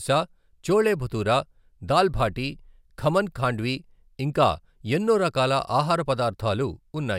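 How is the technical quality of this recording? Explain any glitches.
No technical faults are audible in this recording.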